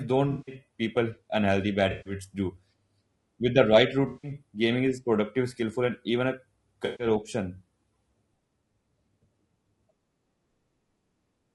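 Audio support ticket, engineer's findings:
Low-delay AAC compression, whole clip: speech rough and grainy, hiss between harmonics, synthetic-sounding top band. Likely AAC-ELD; short frames smear pitch detail, and the damage points to around 32 kbps.

AAC frame loss with concealment at 0.31–0.55 s before "people unhealthy bad", 1.91–2.13 s, 4.07–4.31 s between "the right" and "gaming is productive skillful", and 6.85–7.07 s after "skillful and even a". Smeared, noisy patches of 140–160 ms, each fitting seven or eight lost 20 ms frames, with the decoder filling in from the last good spectrum.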